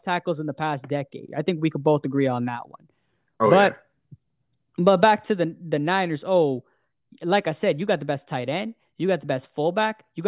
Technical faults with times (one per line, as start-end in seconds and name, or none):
none